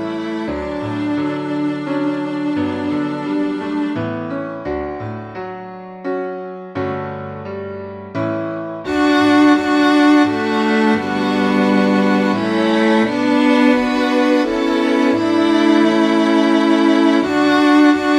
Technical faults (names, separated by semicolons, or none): none